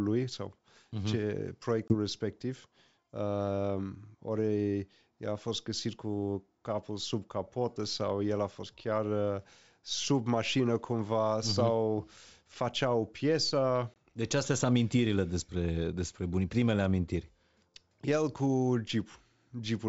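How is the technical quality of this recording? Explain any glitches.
Two short dropouts stand out in this wideband call, both packet loss on an ADPCM call. At 1.88 to 1.95 s and again at 13.94 to 13.96 s, about 20 ms of audio, roughly one packet, vanishes into a hard-edged silence. The decoder's predictor and step size lose track of the sender's, so the speech comes back slightly distorted before settling. The G.722 coding itself leaves only a faint hiss up top.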